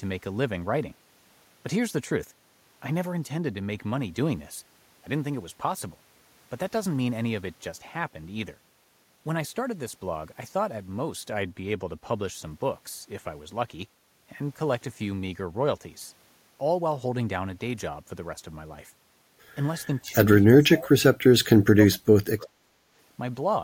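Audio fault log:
19.87–22.72 s, speech suppressed in double talk: dips at 19.87, 20.57 and 21.25 s, going from slight to nearly silent, likely the echo canceller ducking everything during overlapping talk.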